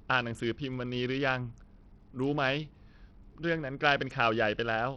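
Throughout the speech, the treble thins out and flickers while a gritty grain and aliasing ride on the sound. This is likely Bluetooth SBC compression at a small bit pool, which fits a rate near 64 kbps: upper sub-bands lose their bits and the rest are coarsely quantised.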